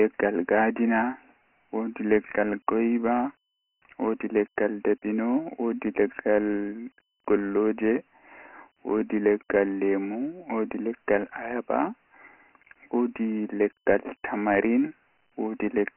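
Speech coded throughout with Dialogic VOX ADPCM, the OKI-style scheme that stores each sample as a 4-bit step from a running prediction. The sound fits about 24 kbps, meaning 4 bits at 6,000 samples a second, so nothing survives above 3.1 kHz. A telephone band of 250 Hz to 3.4 kHz also thins the low end. The coarse steps can't follow the waveform closely, leaving heavy damage as a gritty hiss that trails the speech.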